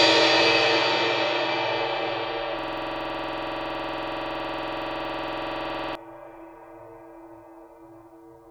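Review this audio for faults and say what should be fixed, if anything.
From 2.59 to 5.95 s the music turns into a system hang loop. One 46 ms slice replays identically at 21.5 Hz while the system stalls, which fits a 2048-sample ring buffer. Unlike ordinary stutter, every repeat is exactly the same. A driver watchdog that mutes output when buffer refills stop would prevent it.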